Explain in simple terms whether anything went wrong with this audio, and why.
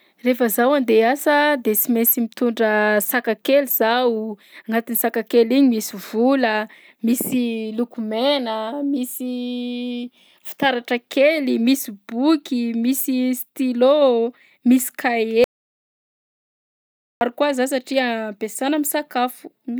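Something did go wrong, near the end of this speech recording. From 15.44 to 17.21 seconds, about 1.8 seconds, the sound cuts out completely. This is an audio dropout to silence. The input was most likely lost briefly, through a loose connection or an accidental mute, while recording carried on. Unlike a natural pause, which keeps faint background hiss and room sound, this gap is dead silence, and whatever was said then is gone.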